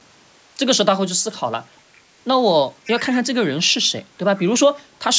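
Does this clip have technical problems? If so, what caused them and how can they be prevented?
Yes. A copy of the speech returns 0.51 s late at 1.95–2.0 s, 2.85–3.17 s and 4.36–4.41 s, roughly 20 to 35 dB below it. This echo leak likely comes from one side playing the call on a loudspeaker, where the echo canceller let the played sound back through the microphone. A headset or stronger echo cancellation on that side prevents it.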